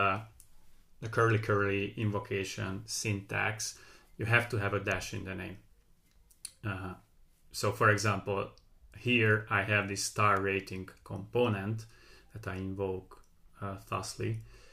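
At 4.91 s there's a sharp little snap sitting on top of the sound, and another, a touch softer, at 10.37 s. Both are electrical switching spikes, likely a nearby switch or motor arcing and the line picking up the burst, peaking around -25 and -30 dBFS.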